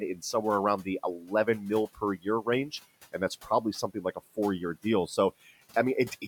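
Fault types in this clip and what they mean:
speech cut by the noise suppressor: the suppressor mistook quiet speech for noise, pulling it down about 10 dB near 1.2 s and about 17 dB around 1.9 to 2.5 s, so bits sound swallowed.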